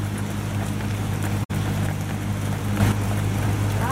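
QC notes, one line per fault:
0.03 to 0.76 s, train of clicks: a regular ticking, around four sharp pops at about 4.1 per second, each peaking near the level of the sound itself. Evenly spaced similar pulses like these likely come from nearby electrical interference or a faulty connection or power supply.
1.43 to 1.51 s, AAC frame loss with muting: the sound fades out to a soft-edged silent hole lasting 64 ms, then fades back in. The decoder zeroed the missing spectrum, which fits about three lost AAC frames, and the overlapping windows smoothed the edges.
2.80 to 2.92 s, sudden gain jump: the whole level, background noise included, steps abruptly by about 6 dB instead of changing smoothly. This is likely a digital gain setting or bit shift applied instantly between samples without any ramp.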